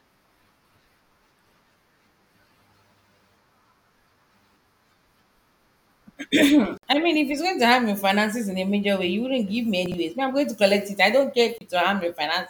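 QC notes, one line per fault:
6.78–6.84 s and 11.58–11.61 s, Bluetooth dropout: The sound cuts to silence for about 58 ms, then again for about 29 ms. Audio then resumes further along, as though it had kept playing through the gap. The cause is likely a wireless link that failed to deliver packets to the headphones in time. The lengths fit roughly four lost packets in the first gap and two in the second.
9.86–9.94 s, chunks out of order: A 20 ms block of audio was delivered or written three blocks too late, so it plays after the material that should have followed it. No audio is missing, but the sequence is scrambled. There are three abrupt joins where the block was cut out and reinserted, and the passage comes across as a brief jumbled stutter.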